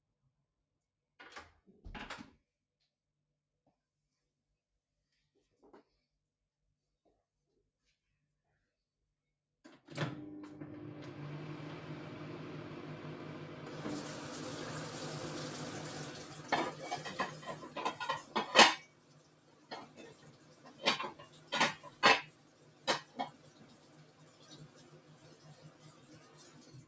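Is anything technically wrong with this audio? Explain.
Yes. A noise suppressor applied to music or sounds runs through this entire clip of sounds. A suppressor built for speech treats steady and fading sound as noise, so its gain swings by around 20 dB. Sharp onsets pass while sustained parts and tails sink, pump and thin out.

Sound cut by the noise suppressor occurs at 0.0–1.19 s, 2.4–5.61 s, 5.84–8.69 s, 8.87–9.63 s, 18.78–20.85 s, 21.1–21.53 s, 21.74–22.03 s and 22.23–26.87 s. In each span the suppressor mistook the sound for noise and pulled it down by about 13 to 14 dB at its deepest, so held sounds dip and decays are cut short.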